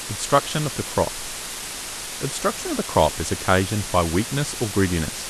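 From start to finish the speech sits under a steady, even hiss, the sign of low bit depth with dither. The noise level suggests something like a 5-bit signal, with dither added before rounding, so the coarse quantisation error comes out as flat white noise rather than gritty distortion. It's loud too, only around 10 dB below the speech, so the hiss never lets up, even between phrases.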